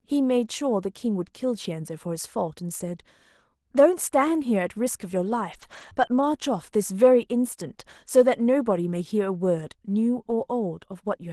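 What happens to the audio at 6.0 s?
At 6.0 s the audio sits inside a lost packet rebuilt from error correction, running from 5.97 to 6.27 s. Packets in this stretch never arrived. The decoder instead played the low-bitrate backup copies carried in the packets that followed. There is no gap. The sound turns rougher and noisier for about 160 ms of rebuilt audio.

The same repair occurs just before, from 5.61 to 5.91 s. Between the two, at 5.93 to 5.97 s, a short concealed packet loss fills about 20 ms that never arrived. The receiver extends the preceding sound, leaving a brief smear or wobble.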